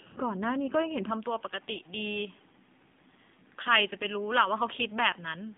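From start to finish, the speech has passed through the AMR narrowband mobile codec. The band is squeezed to roughly 150 Hz to 3.6 kHz, with nothing above 3.7 kHz. The low rate, which fits the 7.4 kbps mode, leaves too few bits for the pulse-excited vocal-tract model. Sibilants go dull, and the speech takes on a plainly audible buzzy, synthetic edge that marks a thin mobile call.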